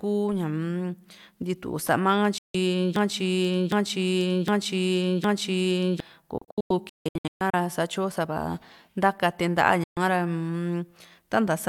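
Speech marred by two kinds of fault. Digital broadcast dropout: the receiver lost valid frames and muted with a roughly 3 ms fade, cutting the sound to silence at 2.38–2.55 s, in scattered holes from 6.38 to 7.54 s (about 0.67 s lost, longest gap 160 ms), and at 9.84–9.97 s. A broken-record loop follows, likely from a stalled stream resending its last buffered fragment: from 2.96 to 6.00 s a 760 ms piece repeats four times back to back, and the intended audio is lost.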